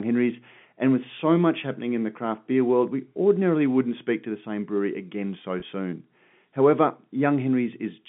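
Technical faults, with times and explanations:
5.60 to 5.62 s, packet loss with pitch repetition: about 20 ms of speech went missing, which fits a single dropped packet, and the receiver filled the hole by replaying the last pitch period. Because the loss is so short, the concealment never fades to silence. It comes across as a brief held, slightly buzzy sound before the speech continues. A spectrogram would show the harmonics frozen flat for that instant, and the waveform would show one cycle repeated, all within the 3.5 kHz telephone band of the G.711 line.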